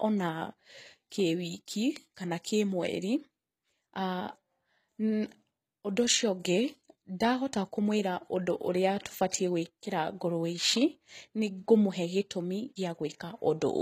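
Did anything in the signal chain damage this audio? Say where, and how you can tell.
Yes, at the codec stage, throughout: plainly audible HE-AAC compression, likely, since treble up to 14.9 kHz sounds bright but copied, not cut, making sibilants gritty, which fits about 20 kbps.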